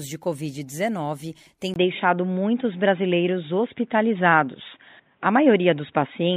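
Speech that turns dull and boxy from 1.74 s to the end, likely from an input switched to a poorer device. A 20 ms gap marks the switch. On a spectrogram, nothing remains above 3.8 kHz. The waveform shows a small level step and a faint new noise floor.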